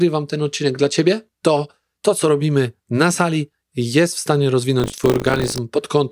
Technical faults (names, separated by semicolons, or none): buffer tearing